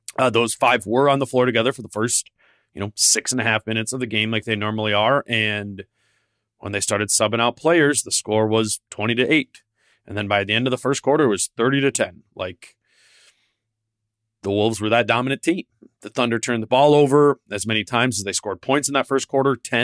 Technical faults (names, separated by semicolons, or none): none